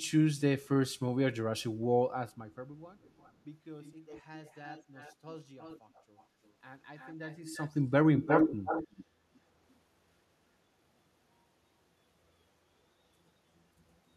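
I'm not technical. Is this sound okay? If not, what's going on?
No. A repeat of the speech trails about a third of a second behind it at 3.0–3.33, 3.82–4.22, 4.45–5.15, 5.59–6.25, 6.45–6.49, 6.97–7.71 and 8.16–9.05 s. It varies in strength, and at the last stretch it is as loud as the original. This is echo leak: likely a loudspeaker's sound reaching a microphone and being sent back.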